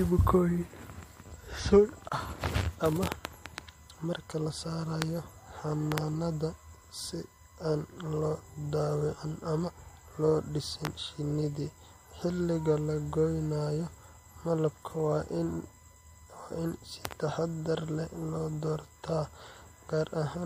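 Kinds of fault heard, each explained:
USB whine: a steady 1 kHz tone from USB frame current leaking through power or ground, sitting roughly 35 dB below the speech throughout.
Gap at a join of encoded pieces: a 28 ms gap opens at 2.09 s, where separately encoded pieces meet with untrimmed encoder delay and padding.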